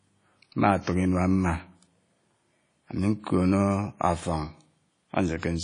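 Throughout, the speech sounds washy and ringing, with hiss breathing with it and nothing above 10.1 kHz, likely WMA compression at a bitrate near 32 kbps.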